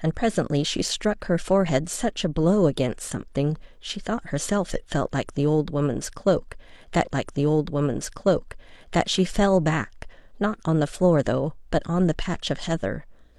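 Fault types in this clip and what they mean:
Stream segment repeated: The player queued the same stretch of this speech twice. From 7.02 to 9.01 s, about 2.0 s of audio plays a second time. A small blip marks the jump back to the start of the repeated part.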